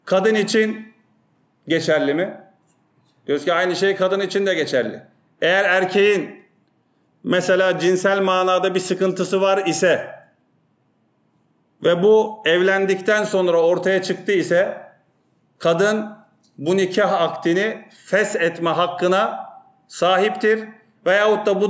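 No technical faults can be heard anywhere in this audio. Nothing in it breaks, drops out or changes unexpectedly at any point.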